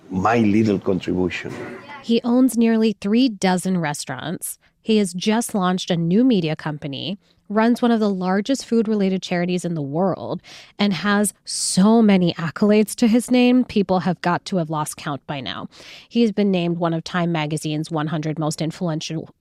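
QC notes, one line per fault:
5.22–5.33 s and 10.96–11.12 s, DAB burbling: brief noise blips break over the speech in single frequency bands. Weak reception lets a bit error rate of around 0.1 percent slip past error correction, corrupting samples and scale factors in the MP2 frames.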